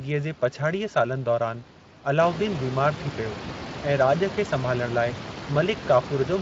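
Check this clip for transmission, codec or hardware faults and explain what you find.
One codec fault runs through the whole clip. The room noise that rises by about 16 dB around 2 s is part of the recording, sitting about 13 dB below the speech.

Speex codec, throughout: the speech carries plainly audible Speex coding damage, at a rate that fits roughly 20 kbps. Speex is a CELP coder, so it rebuilds speech from a predicted vocal-tract filter driven by a coded excitation. At this rate the excitation gets too few bits to follow the real signal. The speech comes out noisy and hoarse from start to finish.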